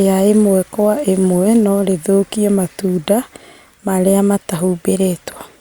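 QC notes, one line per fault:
No faults are audible in the signal path for the speech in this clip.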